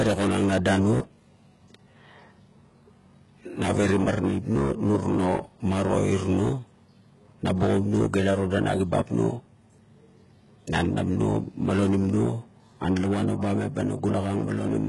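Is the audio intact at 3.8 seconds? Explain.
No. At 3.8 s, as throughout this speech clip, the sound has the heavy damage of HE-AAC compression, likely at a very low bitrate of around 12 kbps. Only the lower band is truly coded. The treble is rebuilt by copying lower bands upward, so s sounds come out gritty and lispy, with nothing above 11.4 kHz. A plain low-pass would sound dull instead. Here the top stays bright but its harmonics don't line up with those below.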